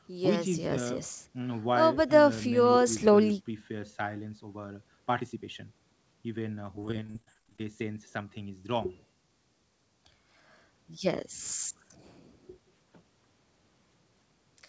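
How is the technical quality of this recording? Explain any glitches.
The recording has one clear glitch, a burst of repeated packet loss (robotic sound). The call path keeps the band below 8 kHz, consistent with a 64 kbps G.722 codec.

From 6.76 to 7.64 s, packets went missing in quick succession, roughly two dozen gaps, none longer than 32 ms. Each gap was patched by extending the preceding sound, concealing about 40% of that stretch. The speech there turns choppy, with fragments missing.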